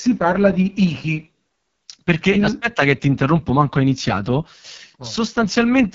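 Throughout, an AMR wideband (HD Voice) codec at heavy damage leaves speech rough and raspy, consistent with the lowest 6.6 kbit/s mode. Unlike narrowband telephony, the band extends to 7.4 kHz.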